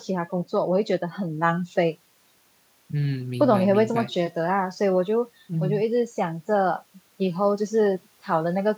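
No technical faults can be heard anywhere in the recording.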